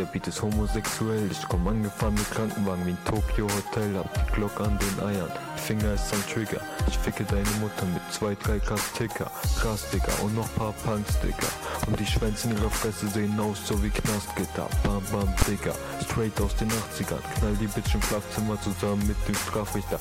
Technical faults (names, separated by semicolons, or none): invalid numbers at full scale